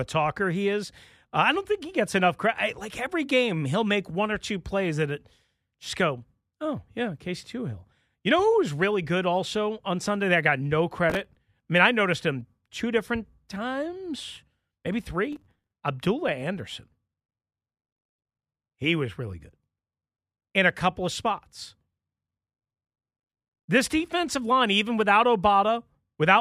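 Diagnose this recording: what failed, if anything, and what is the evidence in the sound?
The driver and buffer stage failed: the processor fell behind and missed audio-buffer deadlines again and again, causing processor overload crackle. Each missed buffer replayed a fragment of old audio with hard edges, and the rapid chain of these splices sounds like gritty tearing over the speech from 11.10 to 11.36 s and again, longer, from 15.33 to 15.76 s. The grain of the crackle fits short buffers of around 5 ms.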